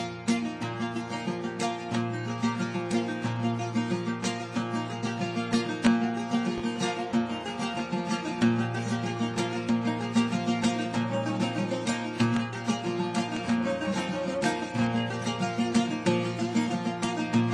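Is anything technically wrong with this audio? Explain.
Yes, there is one loud pop. From 6.58 to 6.61 s a sudden voltage pulse, likely from a switch or plug, adds a single sharp pop about 5 dB above the sound, which continues underneath.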